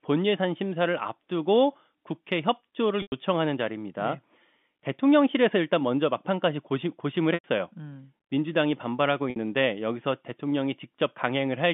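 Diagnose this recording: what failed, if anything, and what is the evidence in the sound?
The fault sits at the network stage: packet loss with pitch repetition, in speech carried over G.711 telephone coding. Gaps fall at 3.02 to 3.12 s, 7.34 to 7.44 s and 9.30 to 9.36 s, lasting 100, 100 and 60 ms. The receiver bridged each gap by repeating the last pitch period, so the sound holds briefly with a buzzy quality and then fades into silence, with speech returning on a short cross-fade, rather than clicking as a buffer underrun would. Those lengths fit runs of 20 ms packets.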